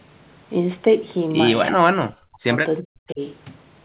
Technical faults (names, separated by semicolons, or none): speech suppressed in double talk